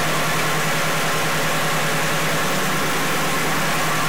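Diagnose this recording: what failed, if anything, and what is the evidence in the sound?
A stuck bit, likely in the converter or its data lines, is there the whole way through. It sounds like a harsh buzz riding on everything, with noise filling the gaps. The stuck bit sits fairly high, around a tenth of full scale, so it flips values often and loudly.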